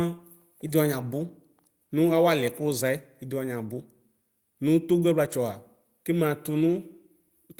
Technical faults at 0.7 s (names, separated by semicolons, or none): short concealed packet loss; lost packet rebuilt from error correction